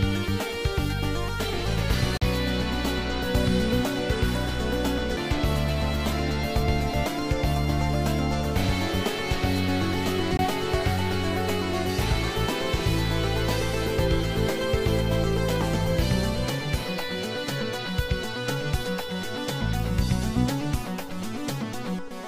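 At 2.17 to 2.22 s, 5.16 s and 10.37 to 10.39 s the audio has a CD skip. The laser loses its track and lands on another turn of the spiral. Each is a short mute, about 40 ms, a few milliseconds and about 20 ms, followed by an abrupt jump in the sound.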